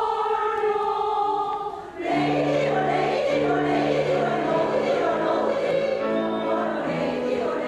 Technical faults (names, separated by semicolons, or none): doubled audio track